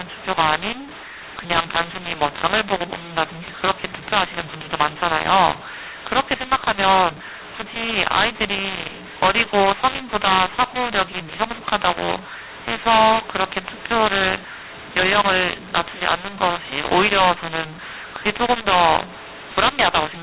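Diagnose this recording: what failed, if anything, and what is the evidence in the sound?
The codec stage failed with mu-law and A-law mixed up: mu-law telephone bytes are decoded as A-law throughout, so the speech is harsh and mis-scaled while pauses fill with hiss. Plain clipping would leave silence clean; here even the quietest samples are lifted above silence, within a 4 kHz telephone band.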